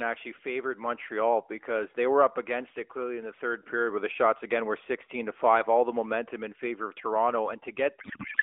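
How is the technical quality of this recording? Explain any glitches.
The recording carries one clear glitch, at the very end of the speech. The narrowband mobile path it travels through, band-limited to roughly 300 Hz to 3.5 kHz with light AMR coding that fits the 12.2 kbps mode, is heard as a thin phone sound and isn't the fault.

Codec payload misread, from 8.00 s to the end at 8.43 s: the receiving side unpacks the AMR frames with the wrong bit layout, treating octet-aligned packets as bandwidth-efficient ones, so every parameter lands in the wrong field. The decoder still synthesises something, but the speech turns into a garbled, warbling noise that barely tracks what was being said.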